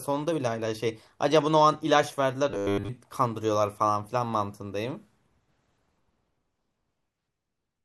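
From 2.51 to 2.89 s the speech turns to a rigid 100 Hz buzz, robotic sound from repeated short buffers, likely 10 ms chunks looped over most of the audio; unlike a dropout, it never goes silent.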